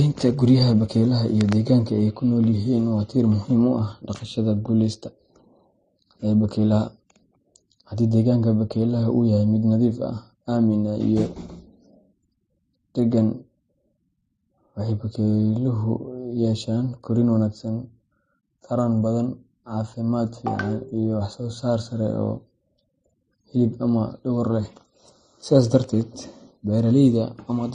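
From start to finish the speech sounds dull and smeared, with nothing above about 9.9 kHz and two layers of compression grit on top of each other, the artefacts of both codecs heard together. The likely cause is transcoding between lossy codecs. The sound fits a low-rate MP3 around 35 kbit/s re-encoded as AAC-LC near 32 kbit/s. The second encoder wasted bits on the first one's damage and added its own, and the lower bandwidth limit remained.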